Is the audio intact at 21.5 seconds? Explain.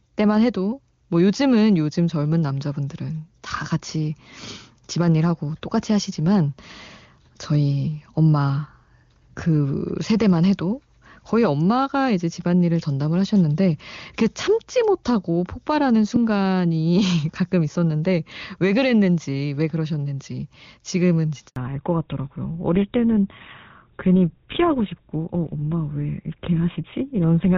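No. At 21.48 s there's a handover gap: the call switches networks and no speech frames get through, so the sound cuts to silence for about 80 ms until 21.56 s. Anything said in that stretch is simply gone.

Right after, from 21.56 s to the end, there's a fallback to narrowband. The call drops out of HD Voice, nothing above 4 kHz survives, and the speech turns duller and rougher, which fits a switch to an older narrowband codec like GSM full rate.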